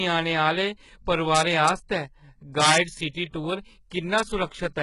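Throughout, the speech was likely passed through HE-AAC compression at a very low rate, consistent with about 12 kbps. Only the lower band is coded and the treble is synthesised by copying lower bands upward, so nothing reaches above 11 kHz. The codec damage is heavy, leaving s sounds gritty, metallic or lispy.

From 1.35 to 1.69 s, from 2.62 to 2.76 s and at 4.18 s, an integer overflow let the signal run past the largest integer value. Instead of being limited, it wrapped to the opposite sign, overdriving by about 1 dB, about 5 dB and about 0 dB. Each wrap sounds as a sudden crack on the peaks, much sharper than ordinary clipping.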